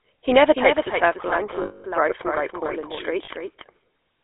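Throughout the speech, the GSM full-rate codec leaves a buzzy, gravelly roughness. The codec rebuilds the voice from a vocal-tract model driven by a coarse, regularly spaced pulse train, and here that damage is plainly audible. The line passes only about 300 Hz to 3.6 kHz, which fits a 13 kbps GSM full-rate call. On a spectrogram, everything above 3.6 kHz is empty and the low bass is missing. Harmonics look smeared and grainy rather than cleanly striped.

Also throughout, a doubled audio track puts a second full-band copy of the speech about a third of a second behind the first, about 5 dB quieter. It has no reverberant tail or room colouring, so it sounds like a flat, clipped echo rather than a space. The likely cause is the same signal being captured again through a slower path. The waveform shows each syllable repeated at a fixed offset, and a spectrogram shows the same pattern shifted right and slightly fainter.

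From 1.62 to 1.84 s, lost GSM frames replace 220 ms of speech. The decoder keeps repeating the last good frame's settings, so the sound freezes into a rough, metallic ring instead of moving on. The spectrogram shows horizontal, unchanging bands. The waveform shows a repetitive buzz, a pattern that fits repeated 20 ms frames. A second, brief loss from 3.24 to 3.29 s gives a short metallic blip of the same kind.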